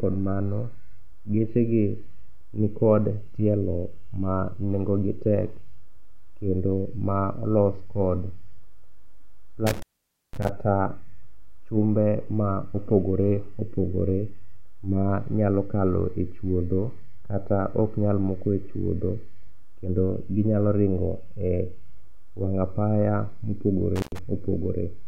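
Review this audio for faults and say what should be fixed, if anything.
A loose cable or plug breaks the signal path twice, an intermittent contact. Between 9.67 and 10.49 s the line opens for about 0.51 s, and between 23.96 and 24.19 s for about 0.1 s. Each time the speech drops out, with crackle where contact breaks and returns. Securing or replacing the suspect cable and connector, and checking that plugs seat firmly before recording, would prevent this.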